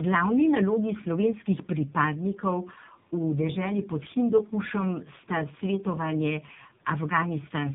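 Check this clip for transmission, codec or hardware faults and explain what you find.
There is one fault, present throughout the clip: tandem speech coding. The sound points to two low-rate speech codecs in a row, iLBC then AMR-NB, joined by a G.711 link. Each coder re-encodes the last one's damage. The speech sounds rough, muffled and warbly, with nothing above 3.7 kHz.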